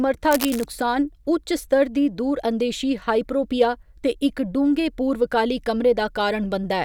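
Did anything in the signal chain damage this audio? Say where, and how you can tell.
Yes, in the analogue wiring. From 0.31 to 0.65 s a dense, uneven burst of scratchy, rustling noise sits over the speech, roughly 10 dB below it. This is cable scratch noise, likely from a worn cable, connector or control being moved so its contact resistance fluctuated rapidly. The noise is irregular and continuous for that third of a second, not the evenly spaced, sharp clicks of a buffer or converter fault.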